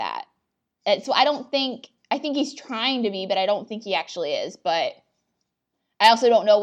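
From 2.34 to 3.76 s the speech turns faintly dull, a channel delay (comb filtering) fault: one channel lags by about a sample, so the mono sum cancels near the top, with the first notch around 20 kHz. A spectrogram shows the highest band thinning across that stretch.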